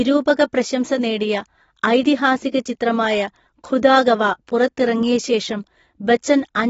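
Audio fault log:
throughout, AAC compression: the speech is band-limited, with nothing above 7.6 kHz, and sounds dull and smeared, with warbling on sibilants and sustained vowels. The likely cause is low-rate AAC-LC coding, fitting a bitrate near 24 kbps, where coarse spectral quantisation is plainly audible.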